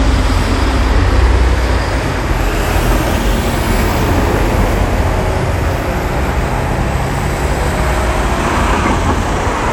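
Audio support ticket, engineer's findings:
Swirly, smeared, hollow texture across the whole clip; transients blurred, attacks soft; no content above 19.8 kHz. Generation loss, likely from repeated lossy encoding, around seven passes through a WMA chain consistent with 96 kbit/s. Each pass requantises on a shifted frame grid, so noise and spectral holes accumulate beyond what that bitrate alone produces.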